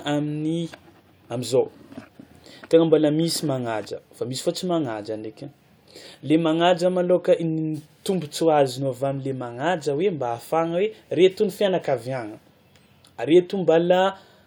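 Listening to this speech recording, nothing stood out as a technical problem at any point.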